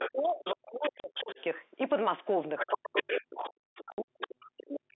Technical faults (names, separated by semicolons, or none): speech suppressed in double talk; other side's voice leaking through; packet loss filled with silence